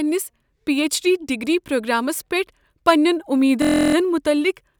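System hang loop, 3.62 to 3.95 s after "پرٛوگرامس پیٹھ پننین": a frozen driver replays one 23 ms slice, heard as a 43 Hz buzz.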